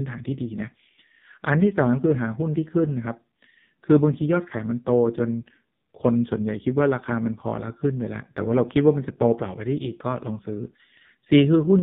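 From start to finish the speech has AMR narrowband mobile codec damage: everything above 4 kHz is gone, and the heavy coding sounds buzzy and synthetic, which fits the low 5.15 kbps mode.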